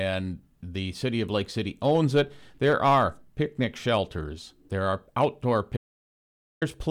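Right after "shelters there are outdoor", at 5.77 s, the speech drops to dead silence until 6.62 s, likely a lost input, so about 0.85 s is gone.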